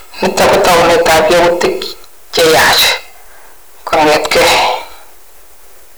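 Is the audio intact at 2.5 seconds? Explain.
No. Hard clipping runs through the whole clip, so it is present at 2.5 s too. The speech is pushed about 36 dB past what the signal path can carry. Every peak is sliced off flat, and close to a third of the waveform sits pinned at the limit. Those squared tops spray harmonics high into the spectrum. At this point the speech sounds harsh and fuzzy, with a gritty buzz on every loud sound.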